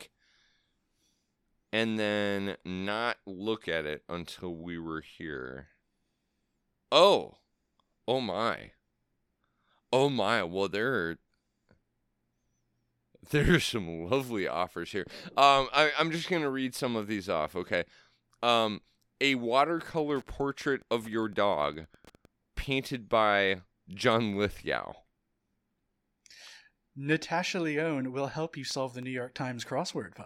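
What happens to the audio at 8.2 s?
Nothing goes wrong at 8.2 s: the speech carries on intact through that moment, with no dropout, click, distortion or other fault to be heard.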